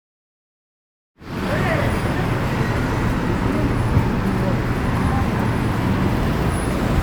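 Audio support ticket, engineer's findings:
No faults found in the audio. A smooth fade-in begins at about 1 s and reaches full level by 1.60 s, with no click or hard edge.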